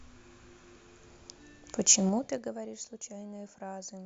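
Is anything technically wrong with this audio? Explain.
Yes. From 2.04 to 2.57 s the speech drops by roughly 15 dB in unsmoothed 3 dB steps, about ten per second, producing zipper noise. Each abrupt gain jump puts a small click into the waveform, heard as a ticking zip riding on the voice during the fade.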